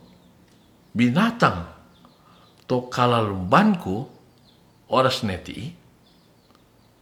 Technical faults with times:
none

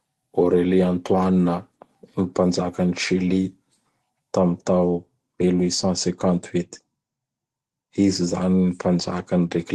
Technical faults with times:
none

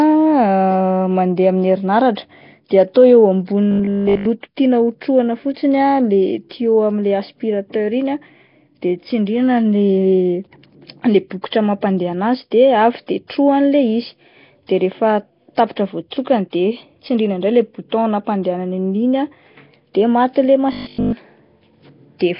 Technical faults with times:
0.00-22.39 Nellymoser compression
3.71-4.25 robotic sound from repeated short buffers
20.72-21.12 robotic sound from repeated short buffers

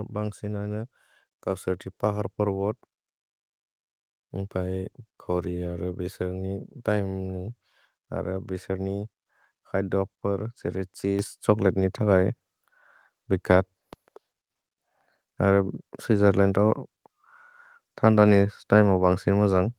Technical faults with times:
11.19 microphone volume stepped up

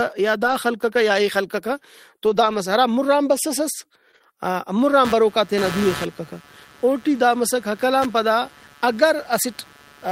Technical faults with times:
0.43-0.53 lost packet rebuilt from error correction
2.25-2.55 lost packet rebuilt from error correction
4.11-4.34 short concealed packet loss
4.14-4.16 lost packet rebuilt from error correction
5.05-10.08 computer activity noise

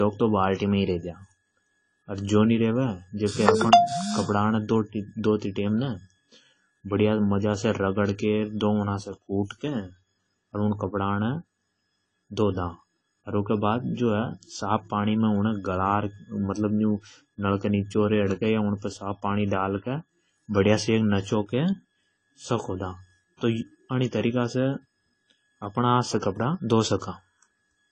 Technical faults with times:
0.00-27.92 AAC compression

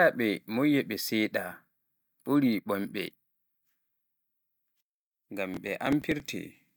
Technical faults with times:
5.54-6.28 processor overload crackle

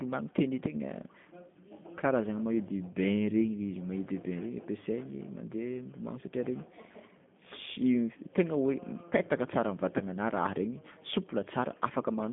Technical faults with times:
0.00-12.33 G.729 codec

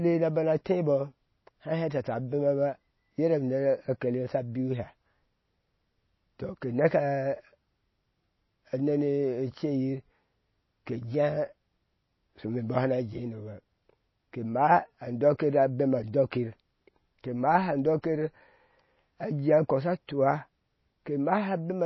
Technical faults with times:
0.00-21.86 MP3 compression

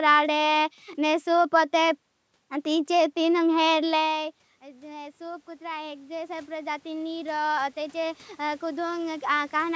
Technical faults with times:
4.08-9.71 automatic gain rising

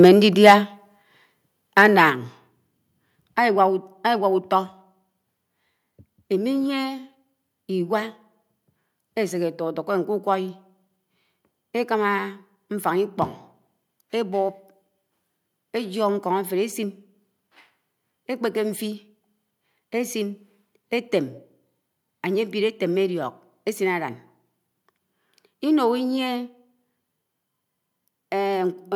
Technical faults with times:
0.04-0.08 microphone overload
0.46-0.54 microphone overload
1.02 microphone volume stepped down
1.78-1.86 microphone overload
2.10 microphone volume stepped down

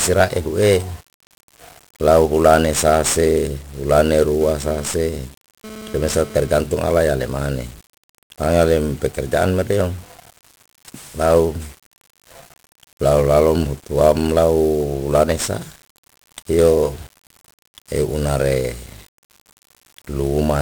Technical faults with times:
0.00-20.62 1-bit DFPWM compression
4.41-6.54 GSM phone buzz

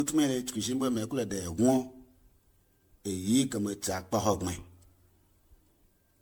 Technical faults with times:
0.00-6.21 generation loss

